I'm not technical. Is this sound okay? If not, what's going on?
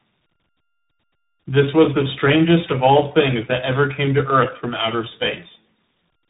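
No. The speech has a fault called tandem speech coding, and it lasts the whole clip. The call passed through three different speech coders one after another. Each one squeezed the sound, unpacked it, and handed it on. Each new coder worked on an already damaged copy, so the flaws stacked up. The voice sounds rough, muffled and warbly. The last coder fits a CVSD system. Nothing above about 3.8 kHz survives, which takes away the crispness.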